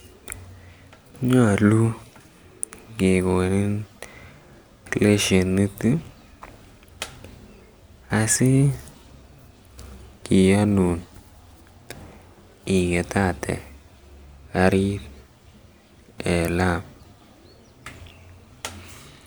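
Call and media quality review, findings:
Nothing stood out on listening; no findings to raise for this speech recording.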